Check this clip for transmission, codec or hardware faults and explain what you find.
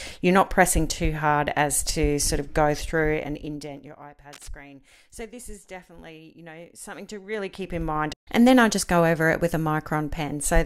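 Two kinds of fault are present: zipper noise during two level moves, and a brief cable scratch noise.

From 2.99 to 4.05 s, the gain drops about 20 dB in unsmoothed 2 dB steps, roughly ten per second. From 6.74 to 8.19 s, it rises about 20 dB in the same steps, roughly seven per second. Each jump clicks, so the sound ticks and zips while the level moves.

From 4.33 to 4.48 s, likely a worn contact being disturbed, dense uneven noise bursts about 5 dB below the signal scratch across the sound.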